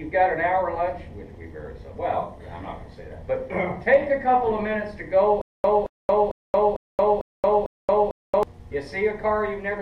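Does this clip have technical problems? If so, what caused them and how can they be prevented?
Yes. A stutter with silent gaps runs from 5.41 to 8.43 s. A 221 ms fragment repeats six times, each time followed by 228 ms of digital silence, for a steady 449 ms cycle. The player likely stalled and replayed its last fragment at each retry, so the audio due in that stretch was lost. A larger playback buffer and a more reliable network or storage path would prevent it.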